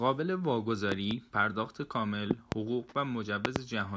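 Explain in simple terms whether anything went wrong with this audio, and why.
Three loud pops break in, each a quick pair of sharp thumps, at 0.92 to 1.13 s, 2.31 to 2.54 s and 3.45 to 3.58 s, getting louder each time. They are likely caused by an electrical jolt such as a plug, a switch or static. The speech carries on underneath.

An echo leak follows at 2.86 to 2.94 s. A faint, short scrap of the voice returns about 0.36 s late, likely because a far-end loudspeaker echo slipped past the echo canceller. Unlike a pop, it repeats the voice rather than adding a thump.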